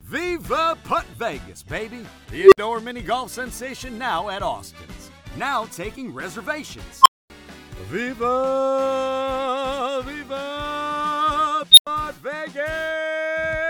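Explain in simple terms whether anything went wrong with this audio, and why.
Something did go wrong, three times: an unstable filter. A processing stage began feeding its own output back on itself until a tone ran away. At 2.39 s a low tone near 400 Hz swells over about 0.13 s, then the sound drops out for about 0.06 s. At 7.01 s a tone near 1 kHz climbs in about 0.04 s, then about 0.24 s of silence. At 11.72 s a high squeal near 4 kHz grows in about 0.06 s, then about 0.09 s of silence. Unlike microphone feedback howl, each squeal ends in sudden silence rather than fading.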